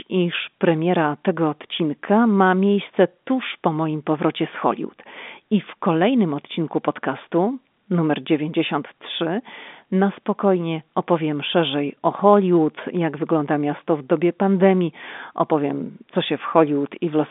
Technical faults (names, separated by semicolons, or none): none